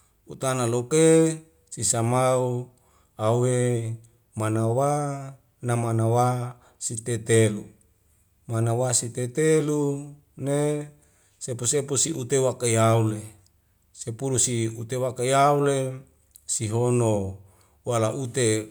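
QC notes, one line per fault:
Nothing stood out on a careful listen to this speech recording.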